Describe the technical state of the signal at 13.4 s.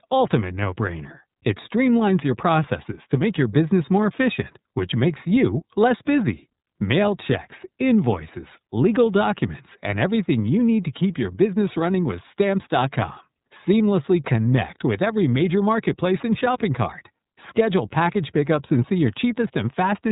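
At 13.4 s the speech carries iLBC codec damage, present throughout: each 30 ms frame is coded independently, nothing above 3.8 kHz survives, and voicing sounds rough and synthetic.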